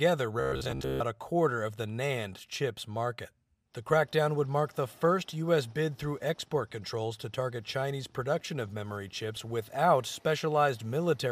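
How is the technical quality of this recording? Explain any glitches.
One glitch stands out. From 0.40 to 1.03 s there is robotic sound from repeated short buffers, a rigid, metallic buzz at 66.7 Hz. It is likely caused by late audio being covered by looping the last 15 ms, repeated over most of that stretch. Unlike dropouts, the sound has no silent gaps.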